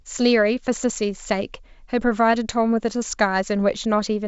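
The speech comes over a G.722 wideband telephone path at 64 kbit/s, which leaves no content above about 7.7 kHz and at most faint coding traces, with no technical faults.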